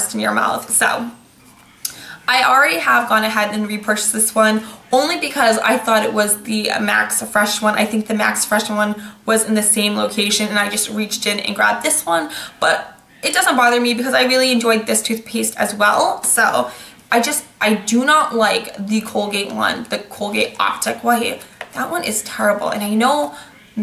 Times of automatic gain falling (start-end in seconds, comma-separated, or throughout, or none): none